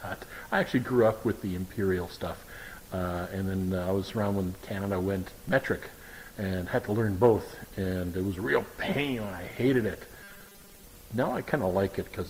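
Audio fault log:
5.49 s, DC step: a single low thump as the waveform's zero line jumps to a new offset, which then drains away at the rate a 2 Hz high-pass would give. The sound itself carries on unchanged through the shift.
7.38 to 12.29 s, adaptive stream at a lower bitrate: the quality abruptly worsens, with more codec artefacts and no gap. This is a stream dropping from a 64 kbit/s Opus version to a 32 kbit/s one.
10.23 to 10.84 s, robotic sound from repeated short buffers: the sound turns into a rigid metallic buzz near 200 Hz that only loosely tracks the original. Most likely audio arrived too late and the player looped 5 ms fragments, covering roughly 70% of this stretch.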